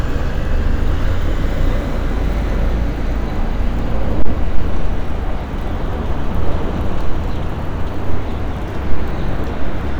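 From 4.23 to 4.58 s there's hard clipping: peaks overdrive the stage by about 2 dB, get sliced flat, and crackle briefly on the loudest moments.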